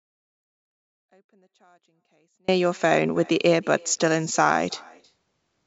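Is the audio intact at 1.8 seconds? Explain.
No. An audio dropout to a faint residue is already under way when the clip starts and lasts until 2.48 s. The speech signal is likely lost, but the path stays live. Only a faint sound remains, roughly 40 dB below normal level.

An echo with no canceller also runs through the whole clip. The far end's loudspeaker feeds its microphone, and nothing removes the loop. The talker's voice returns about a third of a second later, about 27 dB down and thinner.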